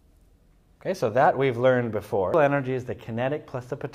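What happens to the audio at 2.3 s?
At 2.34 s there is a brief tick and a near-silent gap of only a few milliseconds, after which the audio picks up from a different point, so the flow lurches rather than continuing smoothly. This is a CD skip. A physical knock or a flaw on the disc threw the laser onto another turn of the spiral track, so the player muted momentarily and resumed reading from the wrong place.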